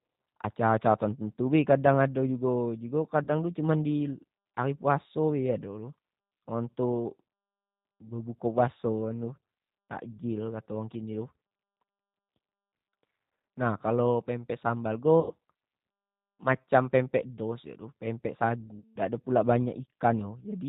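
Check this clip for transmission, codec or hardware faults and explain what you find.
Two faults here: the whole speech clip goes through a G.729 codec, and there are three packet-loss dropouts the decoder papers over.

The G.729 codec (the A variant, at 8 kbit/s) runs throughout and is plainly audible. It rebuilds speech from a vocal tract model, pitch prediction and a few pulses per frame, so everything above 4 kHz is gone and voices come out muffled, slightly rough and synthetic.

VoIP packet loss concealed by the speech codec shows up at 3.24–3.30 s (about 40 ms lost), at 15.20–15.34 s right after "kalo pempek sambal" (about 100 ms), and at 18.80–18.97 s (about 160 ms). The decoder stretches its last pitch and filter into a fading buzz or coloured noise, and the speech stays weak briefly after each gap.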